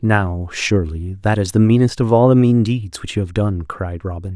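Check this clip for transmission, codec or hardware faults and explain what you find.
Nothing faulty turns up on listening to this speech recording. There is nothing here to trace to a cause or explain.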